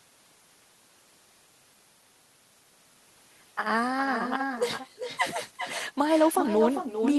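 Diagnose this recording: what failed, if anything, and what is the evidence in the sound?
Every phrase in the speech is trailed by a second, quieter copy, only about 7 dB down, arriving roughly 0.4 s later and sounding thinner. The fault lies in call processing at the far end: this is echo with no canceller. The other party's loudspeaker played the call, their microphone picked it up, and nothing subtracted it, so the voice returned after the network round trip. The Opus path's top end stops near 12 kHz.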